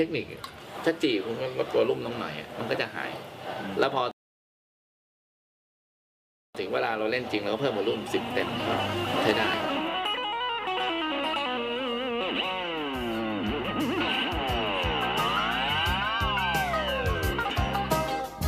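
At 4.11 s the audio drops into a rebuffering stall: the player exhausted its downloaded data and paused until more arrived, leaving silence until 6.55 s. Playback then resumes exactly where it stopped, adding about 2.4 s. The waveform shows a flat gap, the spectrogram a blank column.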